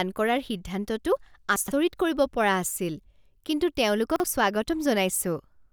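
A speech recording with chunks out of order twice, from 1.56 to 1.72 s and from 4.16 to 4.24 s. A 40 ms chunk plays late, after three chunks and then one. Nothing is lost, but each spot sounds jumbled, with three hard joins.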